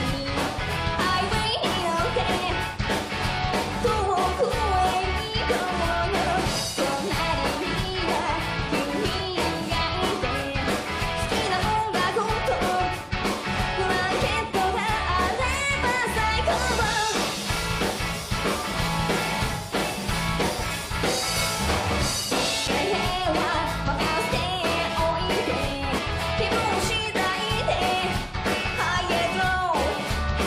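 At 22.67 s there is a CD skip. The laser loses its track and lands on another turn of the disc's spiral. Playback mutes for only about 5 ms. A tick is heard, and the sound jumps abruptly to a different point.

From 25.97 to 25.99 s, compressed frames are skipped. Some frames are never decoded, either missing or rejected as damaged. About 70 ms of audio drops out.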